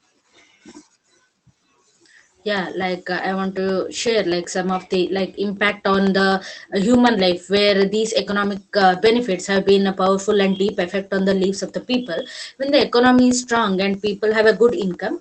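A steady ticking runs through this speech recording from about 0.07 s to the end at 15.21 s, with a tiny silent gap every 0.125 s. These are periodic USB or driver dropouts: something stalls the audio path on a fixed schedule, and each stall drops a sliver of sound. The speech also passed through a call codec, and its top end stops near 8 kHz, consistent with Opus at around 24 kbps.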